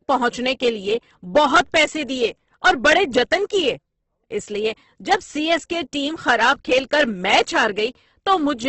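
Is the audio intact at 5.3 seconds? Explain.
No. At 5.3 seconds, as across the whole clip, the speech carries heavy damage, likely from Opus compression at a low bitrate fitting 12 kbps. Starved bands are filled with folded or noise content, so the sound turns rough and grainy. A spectrogram shows a hard ceiling near 8.2 kHz and blotchy, smeared bands beneath it.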